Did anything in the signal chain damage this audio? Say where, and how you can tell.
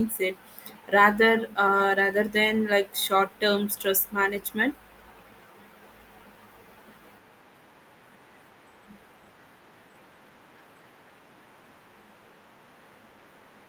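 No, nothing in the signal chain damaged this audio, and I can't point to anywhere it went wrong.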